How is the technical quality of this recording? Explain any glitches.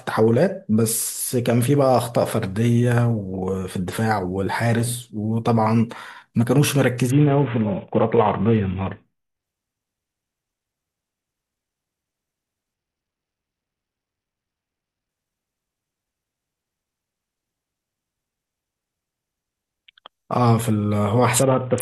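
The speech suffers a Bluetooth SBC bit pool drop three times: 7.10 to 9.43 s, 12.74 to 15.09 s, and 21.42 s to the end. Each time the encoder is starved of bits. The upper sub-bands get almost nothing and the rest are coarsely quantised, which fits a bit pool cut from 28 to 5, near 54 kbps. The treble goes dull and a gritty grain rides on the speech until full quality returns.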